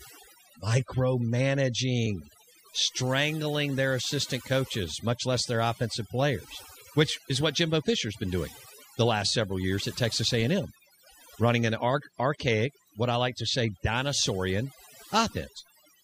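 Speech runs its whole length, and the gaps between phrases fall to near silence flecked with twinkling specks. That is overdone noise removal: a noise reducer set too hard on noisy audio mutes individual frequency bands near its noise estimate, taking quiet speech detail with them.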